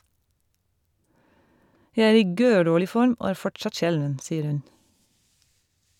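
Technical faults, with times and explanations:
No technical faults detected in this speech recording.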